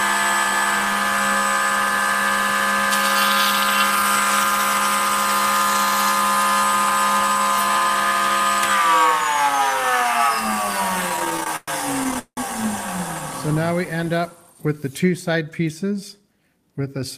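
The audio plays cleanly until about 11.09 s, where repeated stalls (stutter) set in and last to 12.39 s. The jitter buffer kept running dry, so the receiver stretched the last sound across each wait, with the longest gap at 180 ms. About a third of that stretch is filler, roughly 437 ms in total, and nothing is actually lost, but it drags and hiccups. Then from 15.29 s to 16.28 s there's a jitter buffer speed-up. The buffer had built up too much audio and trimmed short pitch-period slices to catch up, so that second runs about 8% fast at the same pitch and sounds a little rushed, with around 70 ms shaved off.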